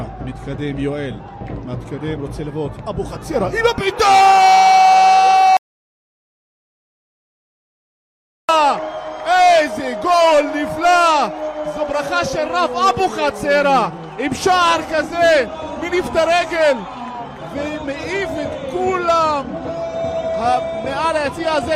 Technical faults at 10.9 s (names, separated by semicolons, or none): none